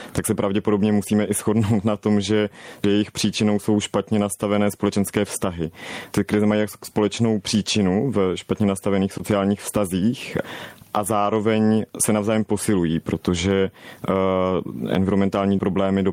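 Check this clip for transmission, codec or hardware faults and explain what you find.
Two faults are present, one running through the whole clip and one brief dropout.

Gain pumping runs throughout. The input gain was likely set far too high, so a fast limiter clamps down on every loud syllable. The gain swings by around 20 dB, leaving the level flattened and squashed.

Short concealed packet loss occurs from 9.17 to 9.21 s, between "příčinu v špatně nastavených" and "vztazích a zároveň se". About 20 ms of audio failed to arrive in time, and the receiver extended the preceding sound to cover the gap before blending back. It comes across as a fleeting smear or wobble.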